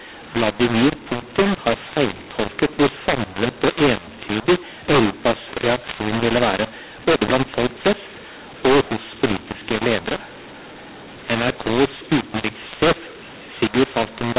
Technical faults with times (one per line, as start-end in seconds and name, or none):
0.00-14.39 mu-law and A-law mixed up